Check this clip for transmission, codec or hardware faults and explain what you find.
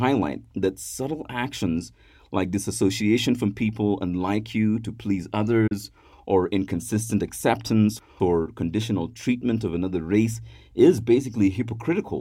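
One transmission fault: a digital broadcast dropout between 5.67 and 5.72 s, right after "like you to please" and before "or inconsistent acceptance or". The receiver lost a valid frame of the digital stream and muted its output until good data resumed. The speech fades out over about 8 ms, leaves a short hole with about 32 ms of programme gone, and then returns mid-phrase. The size of the gap fits a single lost frame.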